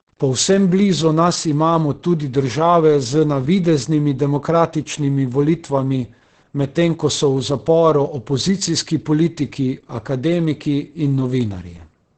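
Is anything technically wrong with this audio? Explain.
Yes, there are two problems. All the way through, the speech carries heavy Opus voice compression. It's coded with the SILK linear-prediction mode at a rate that sounds like roughly 10 kbps, so nothing survives above 8.7 kHz and the coarse excitation coding leaves the speech muffled, hoarse and a bit robotic.

From 0.0 to about 1.71 s there's a grainy, signal-following grit whose level is roughly 45 dB below the speech, and quieter moments sound rough rather than smooth. That's likely low bit depth without dither, around 9 bits with plain rounding, so the quantisation error tracks the waveform instead of sitting as steady hiss.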